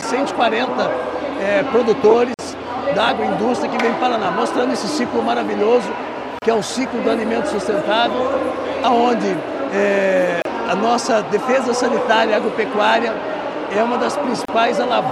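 At 2.34 s a gap at a join of encoded pieces cuts about 47 ms of silence into continuous sound. It returns at 6.39, 10.42 and 14.45 s, each 32 ms, at a steady 4 s spacing. The pieces were encoded separately and butted together, so encoder start-up delay and last-frame padding stay in. Each one is heard as a brief dropout, after which the sound resumes where it stopped. On a waveform each shows as a flat notch, and on a spectrogram as a thin vertical blank band with slightly smeared edges.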